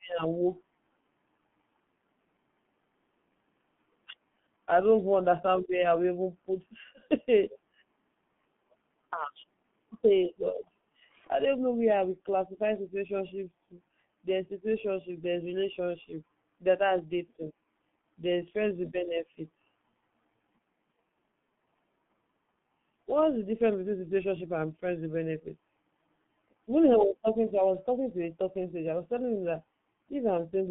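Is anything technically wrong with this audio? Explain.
Yes. The G.723.1 codec is present throughout: speech is squeezed into a telephone band of roughly 150 Hz to 3.4 kHz with nothing above 3.6 kHz, and the slow 30 ms frame updates, consistent with about 6.3 kbit/s, leave it heavily muffled and hoarse, with smeared consonants.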